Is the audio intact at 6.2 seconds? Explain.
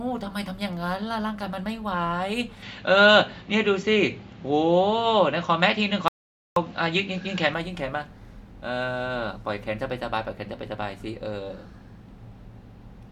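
No. An audio dropout to silence runs from 6.08 to 6.56 s, a gap of about 0.48 s of silence with no room tone at all. The input was likely lost for that moment while the recorder kept writing, so anything in that half-second is gone.

The same moment also falls inside an input switch to a poorer device, from 2.62 to 7.54 s. Here the sound turns duller, with nothing above 7.6 kHz, a level shift of about 5 dB, and a faint new noise floor some 50 dB down, likely from a narrower-band microphone or headset profile.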